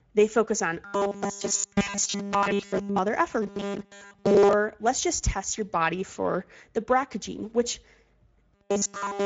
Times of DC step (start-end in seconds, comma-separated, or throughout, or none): none